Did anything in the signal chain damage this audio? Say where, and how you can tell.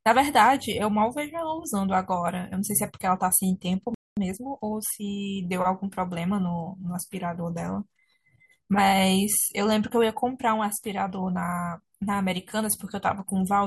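Yes. At the playback stage there is a playback stall from 3.94 to 4.17 s, a gap of about 225 ms where the speech simply stops mid-flow. On a waveform that shows as a flat line and on a spectrogram as a blank vertical band with hard edges on both sides. The output was starved of data, most likely because the player's buffer ran dry or its thread was briefly blocked.

Straight after, from 4.17 to 5.05 s, comes time-compressed catch-up: the speech runs about 1.25 times too fast but keeps its normal pitch. The player is working off its backlog by cutting out short slices and cross-fading the joins. On a spectrogram the harmonics stay at the same height while syllables and formant movements are squeezed closer together.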